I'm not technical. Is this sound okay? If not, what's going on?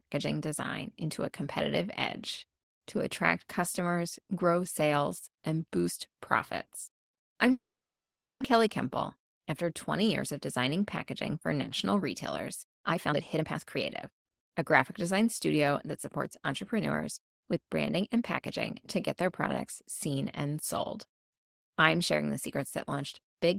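No, there are three kinds of problem.

At 6.87 to 6.90 s there is a CD skip: a quick tick and a tiny mute, then the speech carries on from a slightly different point, as if the disc's laser jumped to another turn of the disc's spiral and lost its place.

From 7.51 to 8.42 s there is a call audio freeze. The last sound hangs on briefly, then goes silent for most of that stretch, about 0.8 s. Speech then resumes exactly where it stopped, with nothing lost. The likely cause is network data arriving late on a call.

Afterwards the receiver catches up with a jitter buffer speed-up, trimming tiny slices out of the speech so it runs faster without changing pitch. From 12.64 to 14.52 s it plays at 137% speed, dropping roughly 0.7 s and sounding clearly rushed. Milder bursts follow at 105% from 14.99 to 15.88 s and 106% from 16.40 to 18.43 s.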